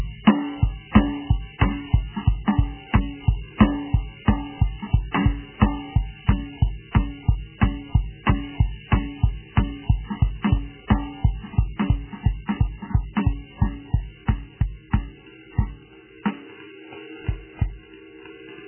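From start to finish the music sits under heavy MP3 compression damage. Nothing comes through above about 3.1 kHz, so the top end is simply gone, and what's left has that watery, swirly churn where quieter detail keeps flickering in and out from one frame to the next. The likely cause is an encoder starved of bits, cutting the treble and dropping weak frequency lines. The damage points to a very low bitrate, something like 8 kbps.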